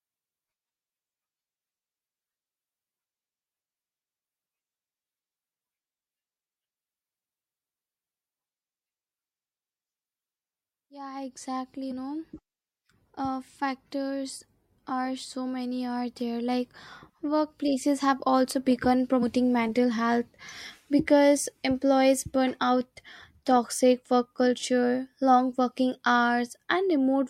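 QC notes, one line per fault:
11.90 s and 19.22 s, compressed frames skipped: decoder loses what fits about four 26.1 ms frames, so sound jumps ahead about 0.1 s; frame overlap smears each join into a brief blip.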